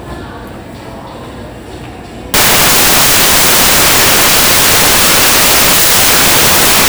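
At 2.34 s the sound turns into loud, harsh broadband noise until the end: samples built from the wrong bytes.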